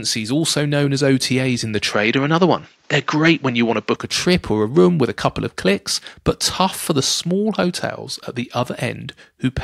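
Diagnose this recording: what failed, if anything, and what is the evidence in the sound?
The capture stage most likely switched the input to a poorer device from 1.93 to 3.96 s, then returned to the original. During that stretch the speech loses everything above 7.6 kHz and takes on a duller, narrower tone, with a faint new noise floor sitting far below the signal. The switch is seamless, with no silence at either boundary and roughly no jump in level, so only the changed bandwidth, tone and background mark the substitute microphone path.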